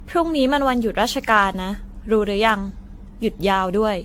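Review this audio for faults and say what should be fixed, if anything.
Generation loss throughout, likely from around ten AAC re-encodes near 96 kbit/s: the speech sounds swirly, hollow and smeared, attacks blur, and nothing sits above 18.6 kHz.

Keep a lossless master through every editing stage and encode to AAC only once, at final delivery.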